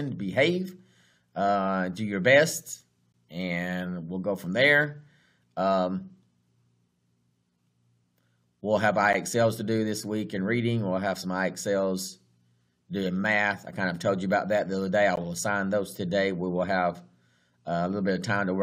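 Brief hard-edged dropouts of silence cut the sound at 3.12, 9.13 and 15.16 s, six seconds apart: a gap between stream segments, where mismatched timestamps leave holes of roughly 12 to 16 ms.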